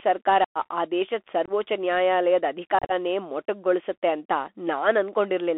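Throughout, the speech carries Bluetooth CVSD headset codec damage: sound is confined to about 300 Hz–3.5 kHz, with scratchy sibilants and granular hiss, which fits a 64 kbps delta-modulated link rather than ordinary telephone band-limiting. Unconcealed Bluetooth headset packet loss then leaves abrupt silences: 0.44–0.58 s (112.5 ms, before "ಆ ದೇಶದ್"), 1.46–1.51 s (22.5 ms, after "ಸರ್ಕಾರ ಆ ದೇಶದ್"), and 2.79–2.92 s, where 82.5 ms of short holes, none longer than 30 ms, give a chopped crackle. Concealment would have smoothed these gaps over instead of leaving them silent.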